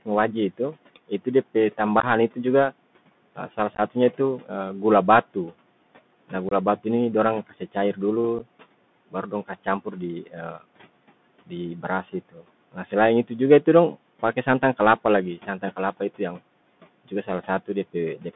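From start to finish the speech runs through the Bluetooth CVSD headset codec. At 64 kbps with one bit per sample, the adaptive step can't keep up with loud high-frequency energy. The line band is limited to roughly 150 Hz to 3.6 kHz, so sibilants turn scratchy and a granular hiss sits under the speech.

Between 0.05 and 7.97 s, speech is cut by the noise suppressor. Soft consonants and word endings, about half a second in total, are pulled down with the background, by up to about 17 dB, and they sound swallowed.

Unconcealed Bluetooth headset packet loss punches abrupt holes into the audio at 2.00–2.05 s, 3.75–3.80 s, 6.49–6.53 s and 8.39–8.41 s. The gaps come from missing voice packets, and each burst loses between 11 and 30 ms.

From 9.11 to 18.25 s the suppressor again cuts speech by up to about 17 dB. Roughly a second of material becomes faint.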